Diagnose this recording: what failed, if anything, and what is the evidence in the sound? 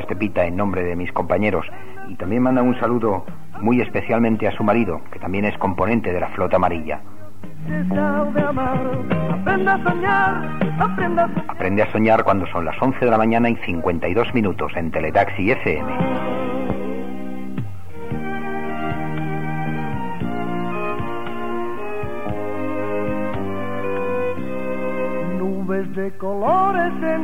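A time-stretched section runs from 8.15 to 11.45 s. The pace jumps abruptly to about 1.4 times normal speed while the pitch stays put. The sound turns rushed, then returns to normal pace at 11.45 s. The stage is software processing after capture, likely an edit that squeezed this stretch to fit a shorter length. The algorithm kept pitch by dropping short pieces of audio, and those missing slices cause the hurried texture.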